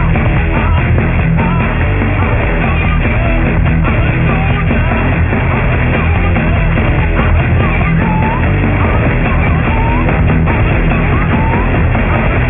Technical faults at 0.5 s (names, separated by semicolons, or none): aliasing